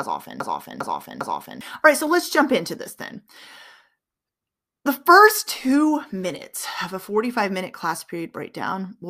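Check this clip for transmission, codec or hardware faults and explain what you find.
There is one fault, a broken-record loop. It is already under way when the clip starts and runs to 1.61 s. A fragment of about 0.4 s of speech repeats exactly, three times, back to back. The likely cause is a stalled player or stream resending its last buffered piece. The speech that belonged there is lost.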